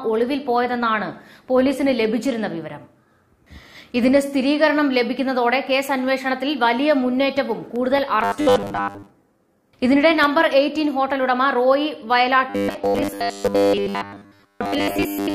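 From 7.76 to 10.24 s, CD scratch ticks appear: twelve clicks, the longest about 3 ms, about five a second, where unrecoverable disc data was patched. Each shows as a thin vertical line on the spectrogram.

From 8.24 to 9.10 s, and again from 12.50 s to the end, the sound turns into a rigid 100 Hz metallic buzz, likely from repeated short buffers of about 10 ms each, with most of the real audio skipped. On the spectrogram this appears as evenly spaced horizontal harmonic stripes 100 Hz apart.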